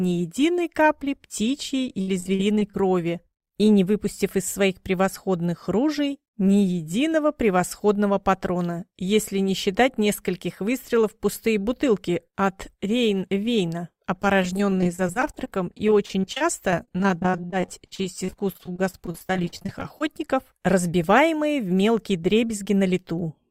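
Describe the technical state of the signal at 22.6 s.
At 22.6 s the signal is intact, with no dropout, clipping, distortion or other fault audible at that moment.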